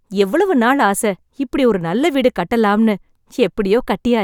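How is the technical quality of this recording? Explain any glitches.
The technical quality of this recording is sound, with no glitches to explain.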